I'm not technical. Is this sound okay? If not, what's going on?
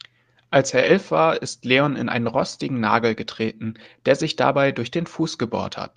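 Yes, nothing wrong can be heard anywhere in this recording.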